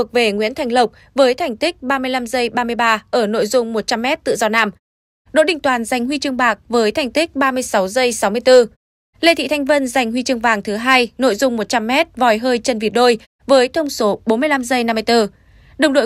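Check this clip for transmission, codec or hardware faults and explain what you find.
No transmission, codec or hardware faults can be heard in the speech, and the background dropping to silence in the pauses before returning for the next sound is normal behaviour, not damage.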